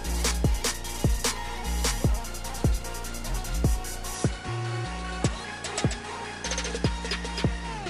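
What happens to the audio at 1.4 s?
Nothing goes wrong at 1.4 s: the audio plays through that moment intact, with no dropout, click, distortion or other audible fault.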